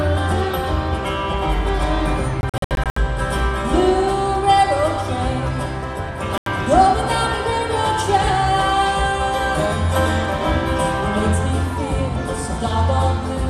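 Audio with Bluetooth dropouts. Silent holes chop it from 2.41 to 2.98 s and again from 6.38 to 6.48 s. Playback resumes further on, likely from dropped wireless packets.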